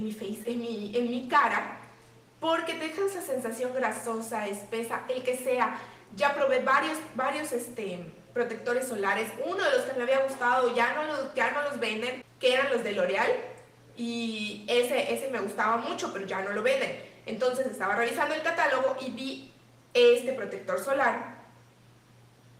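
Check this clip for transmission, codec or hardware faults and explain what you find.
No transmission, codec or hardware problems can be heard anywhere in the clip: the signal stays continuous and steady throughout, with no dropouts, glitches or level disturbances.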